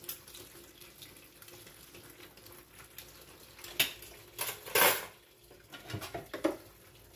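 No technical faults can be heard anywhere in this recording of sounds.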